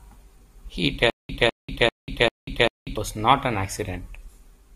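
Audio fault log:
1.10–2.97 s, stutter with silent gaps: a 201 ms speech fragment repeats five times, each followed by about 193 ms of dead silence, likely a stalled stream retrying; unlike a plain loop, true silence separates repeats.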